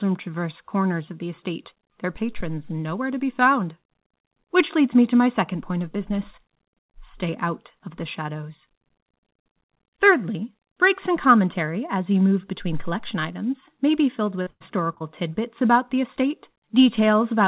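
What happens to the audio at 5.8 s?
Nothing goes wrong at 5.8 s: the speech there passes through intact, carried only by the ordinary telephone-band call path, with nothing above 4 kHz.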